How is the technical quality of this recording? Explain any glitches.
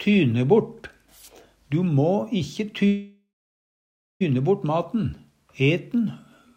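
The recording has one clear glitch, a call audio freeze from 2.87 to 4.23 s. Packets were likely held up in transit, leaving the jitter buffer empty, so the receiver stretched the last sound into a fading buzz for a moment and then went silent for about 940 ms. When data arrived, the audio resumed where it had stopped, with nothing lost, but everything after it now runs about 1.33 s later.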